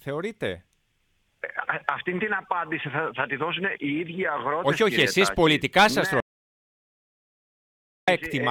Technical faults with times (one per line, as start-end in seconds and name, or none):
6.20-8.08 audio dropout to silence